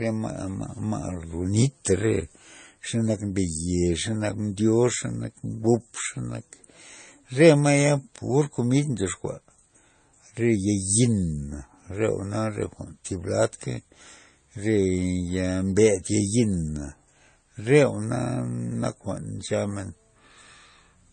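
Throughout, nothing reaches above 9 kHz and the artefacts of different codecs overlap, unlike a single codec; likely transcoding between lossy codecs, fitting low-rate MP3 then AAC.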